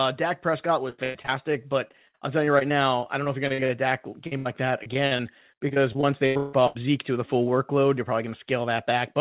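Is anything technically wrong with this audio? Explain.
Yes. The call suffered packet loss in three forms. The sound throughout is band-limited to 4 kHz, which fits a narrowband G.711 call at 64 kbps.

Repeated packet loss (robotic sound) occurs at 0.9 to 1.3 s, 1.88 to 3.71 s and 4.83 to 6.77 s. Packets kept failing to arrive in time, and each hole was patched by extending the preceding sound before the next dropout came. About 220 ms, 400 ms and 540 ms of audio went missing in these three stretches. The longest single gaps were about 104 ms, 59 ms and 156 ms. The result is choppy speech with pieces missing, most densely in the first stretch.

A short concealed packet loss at 4.27 to 4.33 s removed about 40 ms of speech. The receiver bridged the gap by continuing the last sound, pitched if voiced and as shaped noise if not, then blended back into the real signal. This is heard as a brief smear or wobble, and a short sound there can drop out.

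A burst of packet loss follows at 4.37 to 4.47 s, losing about 80 ms in a row. The concealment held the last sound and faded it as the gap lengthened. A voiced sound therefore becomes a sustained buzz and anything else becomes a dying hiss. The speech then resumes past the gap with that stretch simply absent.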